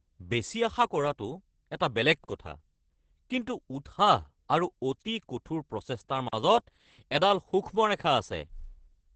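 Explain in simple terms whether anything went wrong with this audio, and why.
Opus voice compression, throughout the whole clip: the speech was squeezed hard by a voice codec to save space. It keeps only a rough model of the sound, so nothing above about 8.5 kHz survives and the fine grain of the voice is coarsely rebuilt. The speech therefore sounds muffled and a little hoarse, with a faintly robotic edge, because the damage here is heavy.

Gap between chunks, at 2.24 s and again at 6.28 s: the audio was handled in 4-second pieces, and each join left a short stretch of silence, about 44 milliseconds long. Nothing is missing from the speech itself, but the sound is interrupted at each join, so you hear two brief holes about four seconds apart.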